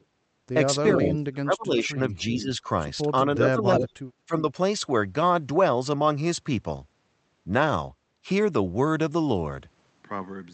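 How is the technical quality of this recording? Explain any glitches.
The speech has a couple of real problems in the first four and a half seconds, on top of an Opus call path that tops out around 8 kHz.

Speech suppressed in double talk, at 0.92–2.65 s, 3.25–3.96 s and 4.25–4.37 s: the voice dips by up to about 30 dB. This is likely an echo canceller ducking it while both sides talked.

Echo leak, at 2.16–2.44 s and 3.77–3.83 s: a copy of the voice comes back about 0.36 s late. This is likely a loudspeaker echo the canceller missed.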